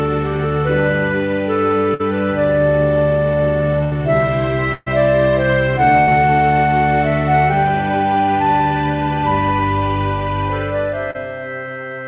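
Bursts of packet loss at 1.94–2.01, 3.83–3.93, 4.73–4.88 and 6.00–6.09 s: runs of packets arrived too late, so the receiver stretched the last sound into a fading buzz or hiss before the audio resumed further along. Each burst drops about 60, 80, 140 and 80 ms of audio, and the longest one fades out to a brief moment of silence. At 11.11–11.16 s, a short concealed packet loss of about 40 ms was patched from the preceding sound, leaving a brief smear before it blends back. All of this sits within a band that stops at 4 kHz, which fits G.711 telephone coding.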